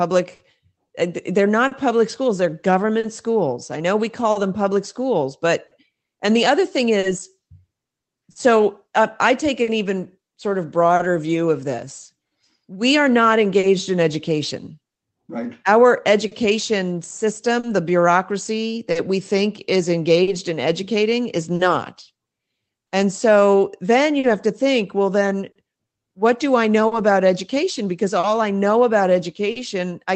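A speech recording carried over a call path, with Opus coding audible as a band limit near 8 kHz and a bitrate that sounds like about 20 kbps. It has two problems. The first is clock drift between sender and receiver throughout the clip. The sender's clock runs roughly 3 percent slow relative to the receiver's, so the jitter buffer keeps draining. The receiver compensates by stretching or repeating small slices of audio. The result is small timing hiccups that recur at uneven intervals across the whole clip. The second problem is scattered short gaps from 0.35 s to 29.58 s, about twenty in all. Each is a lost or late packet that the receiver patched by extending the preceding sound. None runs beyond roughly 40 ms, and together they cover about a second, around 3 percent of that span. They come across as brief ticks or smears in otherwise continuous speech.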